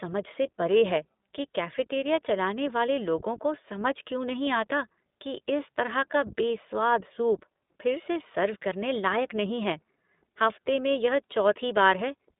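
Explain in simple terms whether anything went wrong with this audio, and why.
The speech sounds thin, muffled and slightly rough and robotic from start to finish, with nothing bright or crisp above about 3.8 kHz. It's the mark of the iLBC codec, a phone-quality voice format that keeps only roughly 200 Hz to 3.7 kHz. It codes the sound in 20 ms chunks, each rebuilt on its own, and that piece-by-piece rebuilding is what gives the voice its plainly audible synthetic edge.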